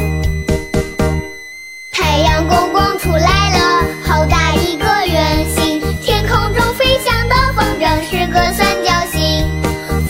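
A switching supply whistle runs the whole way through, a thin tone wandering between 1.87 and 2.12 kHz, roughly 20 dB under the sound, from a supply running in an audible burst mode or beating with another one.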